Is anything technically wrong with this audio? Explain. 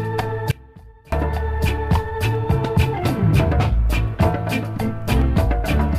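Yes. From 0.51 to 1.12 s there is an audio dropout to a faint residue. The wanted signal was likely lost upstream while the downstream path stayed live, so the sound cuts abruptly to a faint leak roughly 25 dB down, then snaps back.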